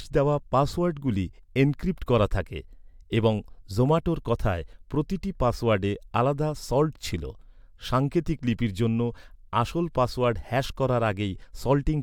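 No technical faults can be heard anywhere in the speech recording; the signal holds steady throughout without any break, distortion or interference.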